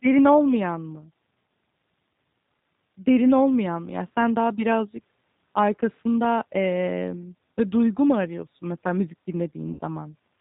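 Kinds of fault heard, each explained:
G.729 codec: The whole clip passes through an 8 kbit/s speech coder that rebuilds the voice from a filter, a pitch predictor and a few pulses per frame. With nothing above 4 kHz, the result sounds plainly rough and synthetic, unlike simple band-limiting, which stays smooth.
VoIP packet loss concealed by the speech codec: Right after "mu arıyorsun mesela müzik", from 9.73 to 9.81 s, about 60 ms of audio is missing, which fits two lost packets. The decoder stretches its last frame into a fading buzzy tone or coloured noise instead of leaving a silent gap.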